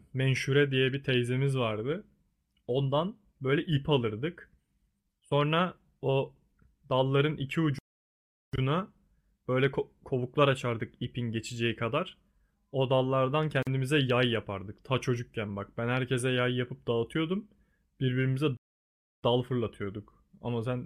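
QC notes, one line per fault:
7.79–8.53 s, playback stall: the speech stops mid-flow for about 750 ms, then resumes where it left off, likely the player running out of buffered data.
13.63 s, gap at a join of encoded pieces: a 42 ms silence with smeared edges breaks continuous speech, leftover encoder delay and padding where separately encoded pieces were joined.
18.57–19.23 s, playback stall: the speech cuts out for about 660 ms, then continues from the same point, again likely a starved or blocked player.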